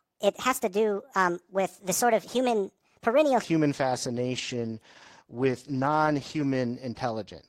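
From the start to 3.44 s, a section at the wrong speed is likely the result of a player or editor running this stretch against the wrong clock, at 1.4 times its recorded rate. Because speed and pitch move together, the speech is raised by about five semitones and delivered noticeably hurried, with syllables compressed and the voice thinner and higher than the material that follows. At 3.44 s the pace and pitch drop back to normal.

From 3.75 s to 6.68 s comes a call bitrate drop. The call's bandwidth estimate fell and the encoder was pushed from 32 kbps down to 14 kbps, holding near that floor for about 2.8 s. With fewer bits, the codec quantises the speech more coarsely and trims the upper frequencies, so the voice loses its crispness and takes on a muffled, watery roughness until the rate climbs back at 6.68 s.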